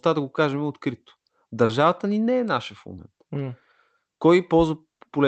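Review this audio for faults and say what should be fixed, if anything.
Short concealed packet loss at 1.65 to 1.71 s: about 40 ms of the speech never reached the decoder in time. The receiver covered the hole by carrying the preceding sound forward, extending its pitch where it was voiced and substituting shaped noise where it was not, then blended back into the real signal. The result is a brief smear in the speech. To prevent it, give the connection more headroom and a larger jitter buffer, or enable forward error correction.

Electrical switching spike at 2.48 s: a sharp snap sits on top of the speech, lasting only a millisecond or so. This is likely an arc from a nearby switch, motor or static discharge, which the audio line picked up and added straight into the signal. The spike passed through the Opus call path, whose 8 kHz audio bandwidth fits a low-bitrate setting around 24 kbps. 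To prevent it, keep switched equipment away from the recording chain and use properly grounded, shielded cabling.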